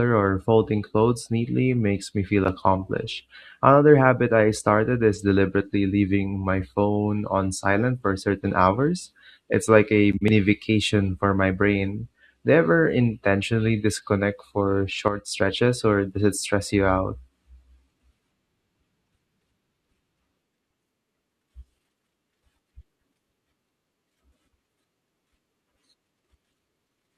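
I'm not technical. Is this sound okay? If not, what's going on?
No. Around 15.08 seconds there is a sudden gain jump: the volume setting inside the system was likely switched in a single instant instead of being eased. The speech and the background noise both drop noticeably quieter at once, staying lower until about 15.28 seconds.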